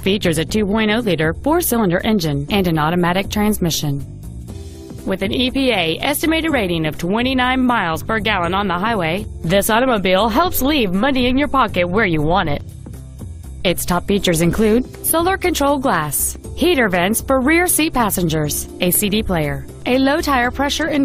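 At 6.51 s there is a single brief disruption from damaged data in a compressed stream, lasting under 20 ms. Part of the encoded data at that point was corrupted, so the decoder could not read those frames correctly, lost its place in the stream and had to search for the next valid frame header before resuming. On a waveform this shows as a short break in the signal's continuity, and on a spectrogram as a narrow vertical strip that differs from the sound around it.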